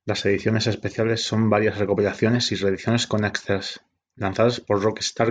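Speech recording with no audible technical faults.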